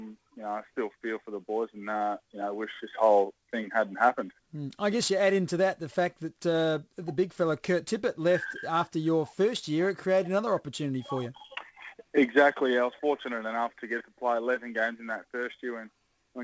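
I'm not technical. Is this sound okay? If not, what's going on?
No. Sample clock jitter runs through the whole clip: the clock timing each sample wobbles by roughly 7 microseconds, so samples land slightly early or late. That adds a hiss or roughness that grows on loud, bright passages and disappears in quiet moments.

A short stall from a late packet happens at 1.97 to 2.04 s. A piece of audio arrived late over the call connection, so the receiver held the last sound for about 38 ms until it showed up. Nothing is lost, but that moment drags briefly, with a slight buzz or dip.

A jitter buffer speed-up runs from 12.05 to 12.83 s. The receiver had too much audio waiting, so it trimmed out tiny slices, about 40 ms in total. The sound plays about 5% faster there at the same pitch and may feel slightly hurried.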